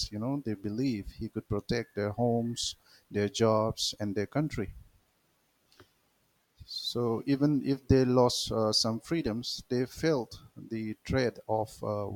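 No audible technical faults anywhere in the recording; nothing to log.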